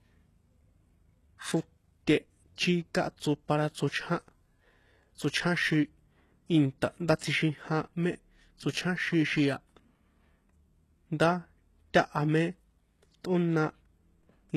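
It's a speech clip with a gritty, metallic top end all the way through, and nothing at all above about 12.3 kHz. The treble sounds rebuilt rather than real, which is likely HE-AAC compression, with the upper band copied up from lower frequencies and damage plainly audible, consistent with something around 16 kbps. There's also a pre-echo right after "inta ndá", from 7.19 to 7.21 s: a short hiss smeared across about 27 ms before the attack, where block-spread quantisation noise leaks ahead of the onset and softens it.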